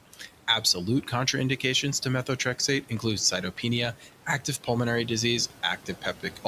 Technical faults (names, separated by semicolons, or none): noise suppressor artifacts; speech cut by the noise suppressor